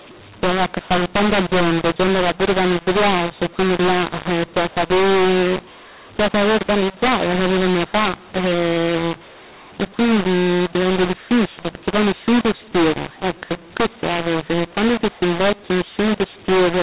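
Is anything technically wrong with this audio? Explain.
Yes. A mu-law and A-law mix-up runs through the whole clip. The 8 kHz telephone-band speech was coded with A-law but decoded as mu-law, so the logarithmic levels map wrongly. Some samples come out too loud, others too small, and near-silent samples jump well above zero, leaving the speech harsh and distorted and the pauses filled with noise.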